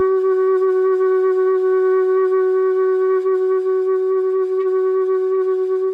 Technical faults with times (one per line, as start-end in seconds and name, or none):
none